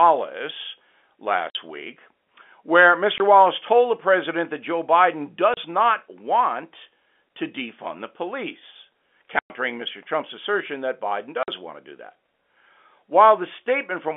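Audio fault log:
1.50–1.55 s, 3.18–3.20 s, 5.54–5.57 s, 9.39–9.50 s, 11.43–11.48 s: packet loss filled with silence. The speech drops out for 50, 20, 30, 110 and 50 ms, and each hole has hard edges where the signal stops and restarts abruptly. The lengths all fit whole runs of 10 ms packets. The waveform shows flat silent stretches with vertical edges. The spectrogram shows blank vertical gaps cut through the telephone-band speech.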